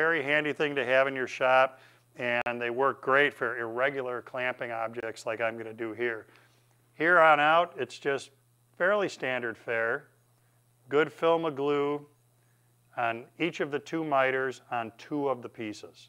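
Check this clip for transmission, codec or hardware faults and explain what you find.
Two short dropouts, both blocks of digital silence. At 2.42–2.46 s a 46 ms hole, and at 5.00–5.03 s a 23 ms hole. Each is heard as a short hole. Samples were likely zeroed when the output buffer went unfilled, consistent with 2048- and 1024-sample blocks.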